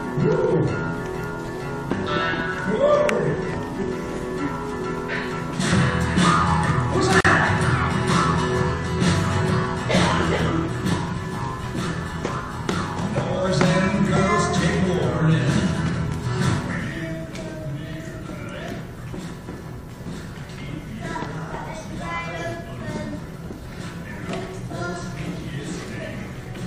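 At 7.21 s the sound drops out for about 42 ms, until 7.25 s, then resumes exactly where it left off. This is a gap at a join of encoded pieces: two separately encoded sections were butted together without trimming, so the second encoder's start-up delay and the first one's padded final frame both stayed in as silence. The edges of the hole are smeared by the codec.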